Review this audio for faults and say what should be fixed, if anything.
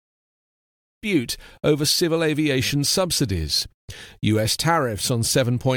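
Nothing needs fixing: the speech has no technical faults, and the smooth fade-in at the opening, rising from about 1 s and complete by 1.07 s, ends without any click or hard edge.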